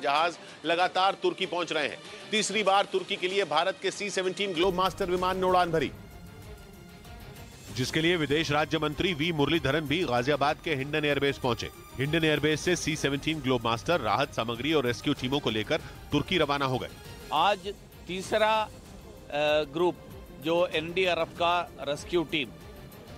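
For the first 4.64 s the sound is duller, with nothing above 11.4 kHz and a faint new noise floor far beneath the signal. It then opens up without a gap or level jump, most likely an input switched to a poorer device. A spectrogram shows a flat ceiling ending abruptly at 4.64 s.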